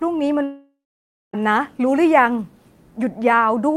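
Just under half a second in, at 0.43 s, the speech cuts out and stays gone until about 1.35 s, which is a long network dropout, most likely. Nothing usable came through for roughly 0.9 s, so the receiver stretched the last bit of sound into a fading buzzy hiss before settling into about 0.56 s of plain silence. When the speech resumes, that missing stretch is just skipped, never recovered.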